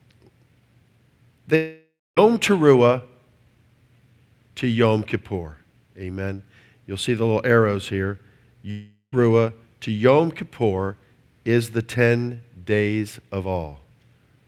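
At 1.55 to 2.19 s and 8.71 to 9.14 s, after "the little arrows here", the speech breaks into a fading buzz, then silence, then resumes with material missing: likely a long network dropout.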